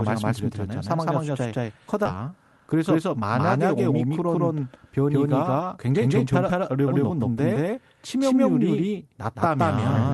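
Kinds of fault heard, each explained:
Doubled audio track: A full-band second copy of the speech trails about 150 ms behind at much the same level. A slower second capture path is the likely cause.
Skip ahead: Around 2.05 s, roughly a second of speech is dropped. Playback jumps forward, joining both sides almost directly with no gap.
Jitter buffer speed-up: From 4.04 to 4.60 s, speech runs 108% fast at unchanged pitch. Short pitch-period pieces, totalling around 50 ms, are removed.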